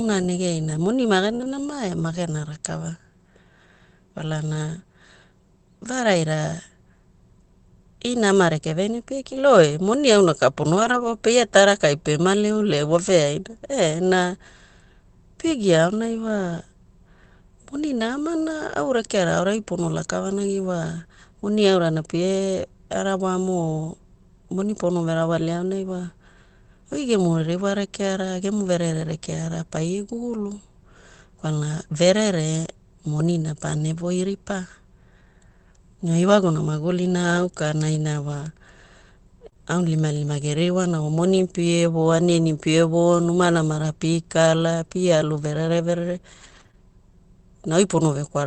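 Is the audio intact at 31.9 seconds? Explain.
Yes, the audio at 31.9 seconds is intact, with no fault at that moment.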